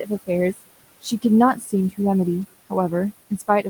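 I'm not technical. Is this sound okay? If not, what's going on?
No. There are noise suppressor artifacts throughout. A filter pushes the room's background noise down between words. The noise sinks between the words and rises again under them.

There is also speech cut by the noise suppressor, from 1.56 to 1.73 seconds. The filter mistook a soft bit of speech for noise, so it turns faint and swallowed.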